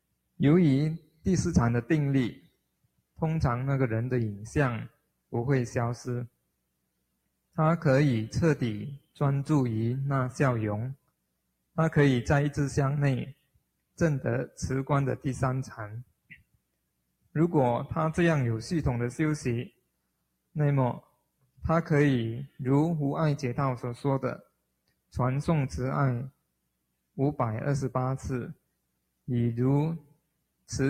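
From start to finish a speech-tuned noise suppressor is working on audio that is not speech, treating steady tones, ambience and decay as noise to be removed. Its gain keeps moving with a swing of around 5 dB, so the level pumps and the sound thins whenever sustained material takes over. On a waveform the envelope breathes up and down; a spectrogram shows sustained bands fading while transients mostly keep their height.

The noise suppressor cut sound hard in six stretches: 0.04 to 3.2 s, 4.89 to 9.18 s, 10.96 to 11.77 s, 13.31 to 17.35 s, 19.7 to 22.6 s and 24.44 to 30.69 s. In each, held or fading sound is pushed down by as much as about 21 dB. The dips add up to between half a second and two seconds per stretch, with the longest near the end, and sudden onsets mostly pass through. On a waveform, tails collapse abruptly after each attack. On a spectrogram they show as dark gaps cut out of otherwise continuous energy.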